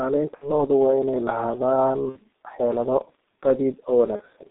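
Throughout, the speech carries heavy G.723.1 codec damage. The band is held to about 250 Hz to 3.7 kHz, at a rate near 6.3 kbit/s. It sounds muffled and hoarse, with blurred consonants.

VoIP packet loss concealed by the speech codec occurs at 0.35–0.51 s, just before "lo'du waa inay lahaadaan", and at 2.10–2.19 s, just after those words. Both gaps suggest about 60 ms of lost audio. A third follows at 4.16–4.21 s, about 30 ms. The decoder stretches its last sound into a fading buzz or coloured noise, and weakness lingers afterwards.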